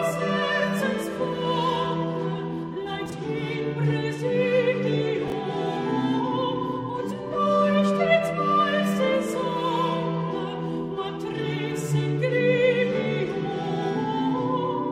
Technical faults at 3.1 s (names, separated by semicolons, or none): chunks out of order